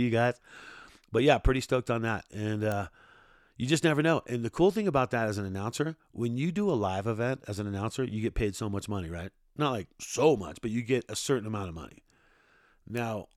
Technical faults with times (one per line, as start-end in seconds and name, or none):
2.72 bit error spike
12.97 bit error spike